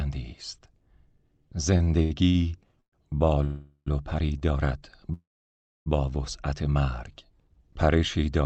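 Repeated stalls (stutter) run from 1.77 to 2.36 s. Packets kept reaching the receiver late, so its jitter buffer emptied five times, with the longest gap 76 ms. Each time, the last sound was drawn out to cover it, about 190 ms in total, roughly a third of that stretch. Nothing is lost, but the audio drags in uneven hitches.

A call audio freeze follows at 2.80 to 2.94 s, with another at 3.44 to 3.88 s and a third at 5.13 to 5.88 s. The likely cause is packets held up in transit, leaving the buffer empty. The sound hangs as a fading buzz or hiss before dropping out: about 100 ms of silence in the first, 70 ms in the second, and 630 ms in the third and longest pause of 728 ms. The audio then resumes exactly where it stopped, so gaps of 120 ms, 419 ms and 728 ms are inserted into the sound.

A short stall from a late packet occurs at 4.38 to 4.43 s. One packet missed its slot, and the receiver stretched the preceding sound by 28 ms until it arrived, leaving a briefly held sound. 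The audio then continues with nothing lost. Throughout, the call codec's band limit at 8 kHz can be heard as missing top end.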